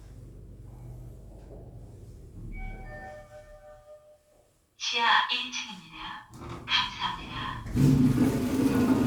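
No technical faults occur at any point in the audio, so there is nothing to place in time order.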